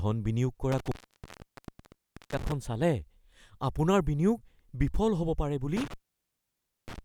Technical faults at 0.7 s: intermittent contact

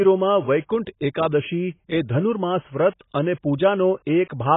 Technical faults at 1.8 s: AAC compression

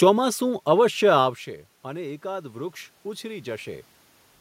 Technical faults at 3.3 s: automatic gain rising

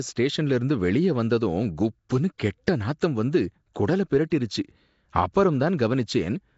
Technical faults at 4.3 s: Nellymoser compression; pre-echo

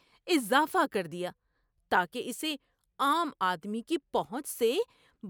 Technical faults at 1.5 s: none

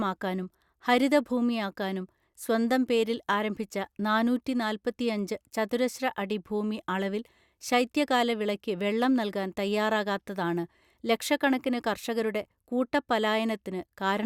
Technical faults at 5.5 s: none

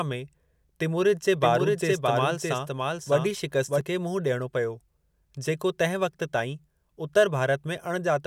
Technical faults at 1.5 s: doubled audio track

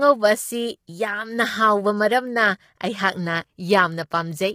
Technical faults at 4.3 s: low-delay AAC compression

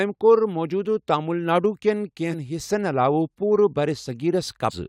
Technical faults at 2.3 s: compressed frames skipped

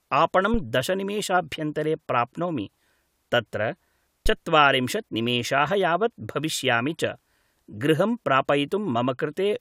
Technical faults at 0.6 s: phantom power thump

